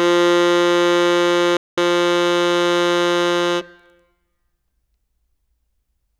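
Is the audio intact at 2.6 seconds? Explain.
Yes, the music plays through 2.6 seconds intact, with no dropout, click, distortion or other fault at that moment.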